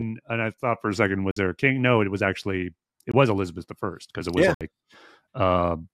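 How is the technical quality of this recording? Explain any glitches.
The speech has three dropouts, each a block of digital silence: 1.31–1.37 s (54 ms), 3.12–3.14 s (21 ms, fitting a 1024-sample buffer) and 4.54–4.61 s (64 ms). The output buffer likely went unfilled, so samples became zeros, giving brief holes. On a waveform, each is a flat line, and on a spectrogram a blank column.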